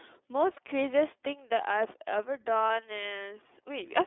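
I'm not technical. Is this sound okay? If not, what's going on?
No. The whole recording has passed through the iLBC codec, an internet-phone format that squeezes speech into small 30 ms chunks. It keeps only a narrow telephone range, with nothing above about 3.5 kHz. So the voice sounds muffled, slightly rough and a bit robotic.

There are also two short dropouts from lost iLBC frames, at 0.53 to 0.59 s and at 2.67 to 2.70 s. Each time one chunk of audio went missing. The playback covered the hole by repeating the last bit of voice, so you hear a brief buzzy, held sound. Then the speech returns straight away.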